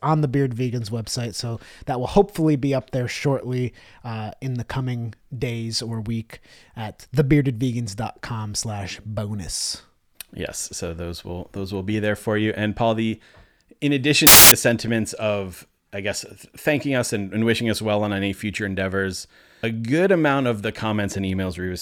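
At 14.27 s the speech breaks into a burst of loud, harsh broadband noise lasting about 0.25 s, until 14.52 s, ending just before "sentiments of I guess". This is a case of samples built from the wrong bytes: for that stretch each sample was assembled with its bytes misaligned or in swapped order, so the rapidly varying low-order bits landed in the most significant position. The result is broadband hiss at high level in place of the signal.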